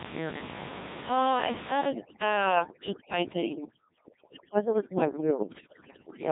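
Codec 2 vocoder damage runs from the start to the end: the speech is rebuilt from pitch, voicing and a spectral envelope rather than the waveform, so it sounds heavily robotic and buzzy. Nothing remains above 3.8 kHz, and the coarseness points to a rate around 1.6 kbit/s.

Overdone noise removal starts at 1.90 s and lasts to the end. The noise reduction is pulling frequency bands down hard wherever they sit near its noise estimate, so the quiet room noise beneath the speech collapses into near silence with twinkling specks.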